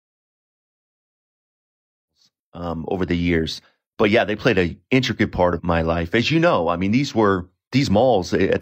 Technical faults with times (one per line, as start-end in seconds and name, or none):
none